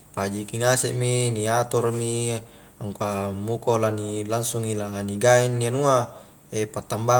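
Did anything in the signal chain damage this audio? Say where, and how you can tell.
No, nothing in the signal chain has damaged this speech recording; the level, timing and frequency content all hold steady with no dropouts, discontinuities or distortion from any stage.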